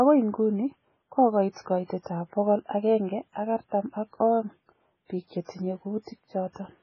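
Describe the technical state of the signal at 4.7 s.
MP3 compression damage is present at 4.7 s, as it is across the whole speech clip, and is likely the cause of what is heard. The encoder has too few bits, so it discards everything above 7.1 kHz and zeroes weak frequency lines that then flicker on and off between frames. This gives a dull, watery, swirling quality, with metallic chirps on s sounds and smeared attacks. The heavy damage fits a very low bitrate near 16 kbps.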